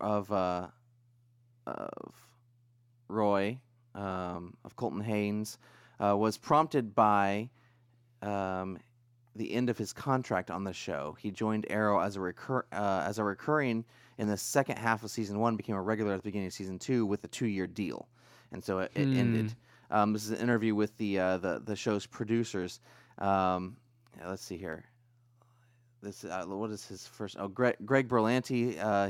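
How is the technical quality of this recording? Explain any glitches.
A regular tick runs through the speech: clicks about every 2.1 s from 1.65 s to 28.92 s, around fifteen in all. These are clock drift buffer slips, likely from two devices running on separate clocks that disagree by something like 150 ppm. The buffer between them slowly drifts until a short block of roughly 15 samples is dropped or repeated, and each jump in the waveform is heard as a click.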